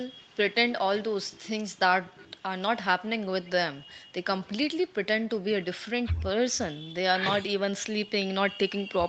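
No faults: the speech carries the expected call-path character, with nothing above about 8 kHz from the microphone processing and codec band limit, and the usual coding texture of the call codec.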